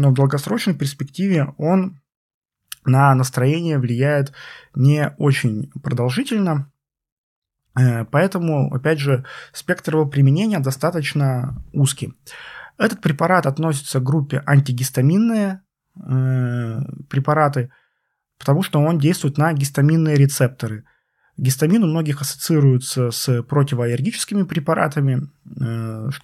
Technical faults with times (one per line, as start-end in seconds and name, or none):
none